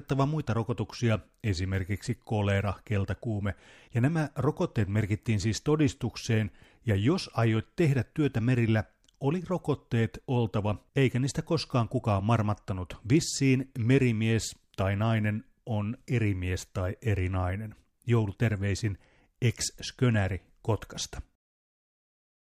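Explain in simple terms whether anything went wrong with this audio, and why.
Listening to the recording, nothing stood out as having gone wrong at any point.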